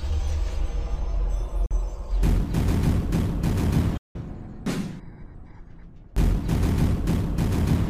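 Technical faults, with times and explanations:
1.66–1.71 s and 3.97–4.16 s, Bluetooth dropout: the output cuts to silence twice, first for about 44 ms and then for about 175 ms, before the sound resumes further along, as though it had kept playing during the gap. This is likely a wireless link failing to deliver audio packets to the headphones in time, so they were discarded. The gaps fit roughly three and then roughly twelve lost packets.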